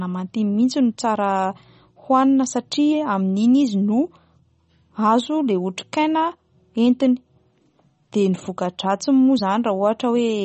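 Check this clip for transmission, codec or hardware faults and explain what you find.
One fault runs through the entire clip: MP3 compression damage, plainly audible from start to finish.

The speech has a watery, swirly quality and chirpy s sounds, and nothing reaches above 8.4 kHz. On a spectrogram that shows as a hard, flat ceiling with patchy, flickering holes below it. The likely cause is an MP3 encoder starved of bits, consistent with a bitrate around 32 kbps. It cut the treble at a fixed frequency and zeroed weak frequency lines that switch on and off between frames.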